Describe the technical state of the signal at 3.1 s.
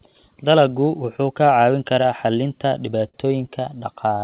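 A sound is briefly held and stretched with a faint buzz or dip from 3.08 to 3.29 s, just after "kaa caawin karaa xallinta". This is a short stall from a late packet: the jitter buffer ran dry and about 53 ms was filled in before the speech resumed, with nothing lost.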